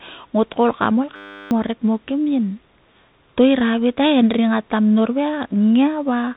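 From the start the speech sounds dull, scratchy and granular, with nothing above 3.8 kHz: a Bluetooth CVSD headset codec, its one-bit adaptive steps fitting a 64 kbps stream. At 1.16 s, after "got koul kam ol", a steady 100 Hz buzz takes over until 1.51 s, just before "o rek mo kim". This is a system hang loop: the same 10 ms piece of buffer replays 35 times while the system is frozen, and about 0.4 s of audio is lost.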